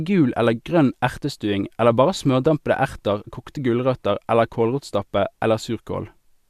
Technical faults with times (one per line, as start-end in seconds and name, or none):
none